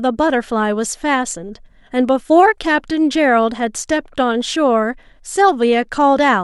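No technical faults can be heard anywhere in this speech recording. There is no moment in it that calls for a timestamp or an explanation.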